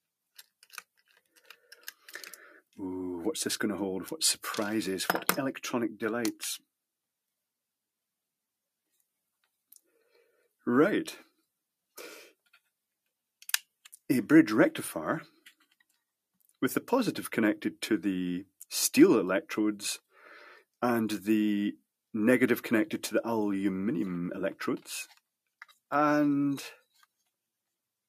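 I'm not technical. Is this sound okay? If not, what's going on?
Yes, nothing wrong here.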